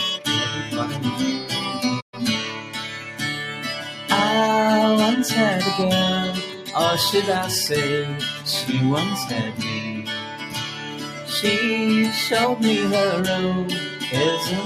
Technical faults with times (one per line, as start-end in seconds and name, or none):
0.00-14.66 noise suppressor applied to music or sounds
2.00-2.14 playback stall
2.52-3.21 sound cut by the noise suppressor
3.86-4.09 sound cut by the noise suppressor
6.47-6.71 sound cut by the noise suppressor
9.80-11.30 sound cut by the noise suppressor